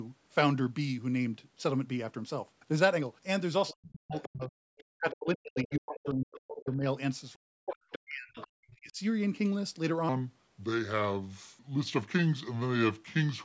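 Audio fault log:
3.68–6.14 s and 7.72–8.47 s, other side's voice leaking through: likely incomplete echo cancellation lets loudspeaker sound reach the microphone, leaving a second voice roughly 15 dB below the talker.
3.72–9.0 s, speech suppressed in double talk: the echo canceller likely mistook overlapping talk for echo and attenuated everything, so the talker dips by up to about 40 dB, in pieces totalling about 4 s.
10.09–13.44 s, section at the wrong speed: likely playback against the wrong clock runs this stretch at 0.764 times normal speed, so the voice drags and drops about 5 semitones.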